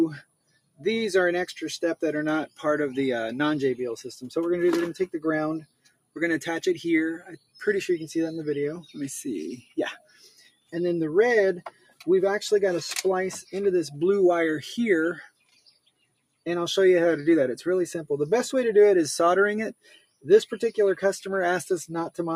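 Right from the start there's a speech-tuned noise suppressor working on audio it wasn't built for, and you can hear it the whole way through. It keeps treating sustained, steady material as noise, so the level rides up and down by something like 5 dB as it clamps and releases. Onsets punch through cleanly, but anything held or decaying gets pulled back, which gives the sound a restless, pumping, thinned-out feel.

On top of that there are eight spots where the noise suppressor cuts the sound much harder: 0.22 to 0.84 s, 5.61 to 6.16 s, 7.37 to 7.58 s, 9.61 to 9.77 s, 9.98 to 10.73 s, 11.67 to 12.06 s, 15.29 to 16.46 s and 19.74 to 20.25 s. In each one it has decided the sustained part is noise and dropped it by about 16 to 21 dB at the worst, so tails sag or vanish early while the attacks are left standing.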